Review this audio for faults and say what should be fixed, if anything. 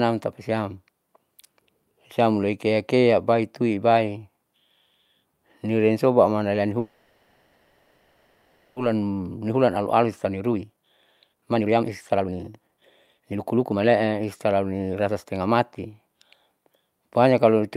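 From 6.79 to 8.78 s the speech stops and the last sound is drawn out as a fading buzz or hiss for about 2 s, then resumes where it left off with nothing lost. This call audio freeze likely came from delayed packets draining the jitter buffer.

From 8.94 to 15.55 s the speech runs hurried, about 130% speed at unchanged pitch. This is a jitter buffer speed-up: the receiver cut short pitch-period pieces, roughly two seconds in all, to clear the backlog from the stall.

Fixing the network path's packet delay, or giving the jitter buffer more headroom and a gentler catch-up rate, would prevent both the stall and the rushed recovery.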